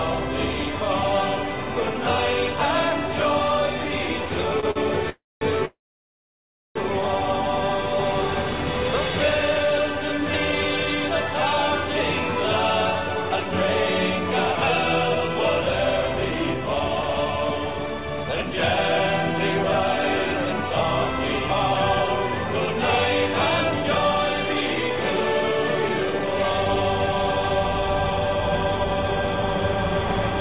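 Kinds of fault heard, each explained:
Short stall from a late packet: At 4.60 s and 4.71 s a sound is briefly held, for 28 ms and then 48 ms, with a faint buzz or dip before the audio resumes where it left off. A late packet emptied the jitter buffer, so the receiver stretched the last sound until it arrived.
Call audio freeze: At 5.10 s the sound stops for 0.32 s, most of it silent, and at 5.65 s it stops for 1.1 s, with about a second of silence, before resuming with nothing lost. Packets held up in transit, likely emptying the jitter buffer, would explain these gaps.
Jitter buffer speed-up: From 12.94 s to 29.09 s the audio runs at 109% speed, hurried but at the same pitch. The buffer held more audio than it aims for, so the receiver trimmed tiny pitch-period slices, roughly one and a half seconds in total.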